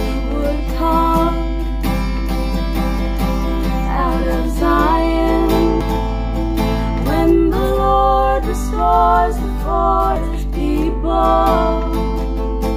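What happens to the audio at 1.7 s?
At 1.7 s the sound sits on top of a steady mains hum, and it is there through the whole clip, not just at that moment. A ground loop or a nearby transformer is leaking the 50 Hz power line into the signal path. It comes across as a constant low drone at 50 Hz with a few low harmonics. The hum is roughly as loud as the wanted sound itself.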